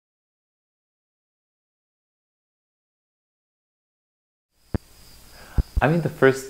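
A sudden voltage step, likely from a plug, a switch, static or a driver glitch, entered the signal path, and the circuitry after it shaped that pulse into a loud pop. The first lands at 4.75 to 4.78 s as a single sharp pop. A second event at 5.58 to 5.80 s holds two pops in quick succession. Each rises roughly 15 dB above the surrounding sound, which continues underneath.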